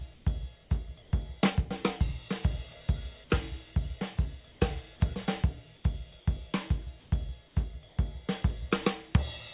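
Comfort noise replaces the background in seven short gaps, at 0.14, 1.02, 4.52, 5.76, 7.0, 7.48 and 7.88 s, each lasting 80 to 120 ms. The real background turns to steady, featureless hiss and shifts by up to about 3 dB. Discontinuous transmission is the likely cause.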